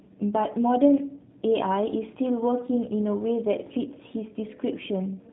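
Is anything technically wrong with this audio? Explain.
Yes. G.729 coding runs throughout: the speech is rebuilt from a vocal tract model, pitch predictor and a few pulses per 10 ms frame, which fits 8 kbit/s G.729A. Nothing above 3.9 kHz survives, and the plainly audible damage leaves speech rough and synthetic.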